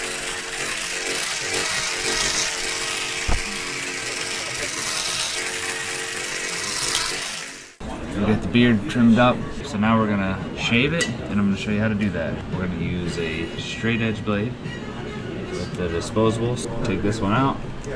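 Nothing in the audio signals a technical problem at any point, so there's really nothing to flag here.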